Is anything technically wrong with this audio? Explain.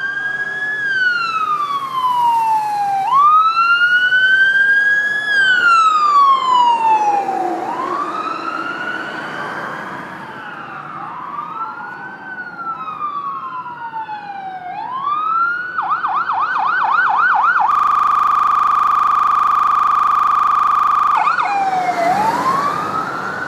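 Yes. A system hang loop occurs from 17.71 to 21.15 s. The system froze while the audio hardware kept replaying its 40 ms ring buffer, so one fragment repeats exactly, about 86 times, producing a rattling buzz at 25 Hz.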